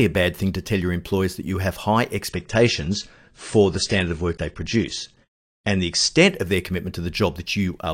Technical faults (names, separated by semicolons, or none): adaptive stream at a lower bitrate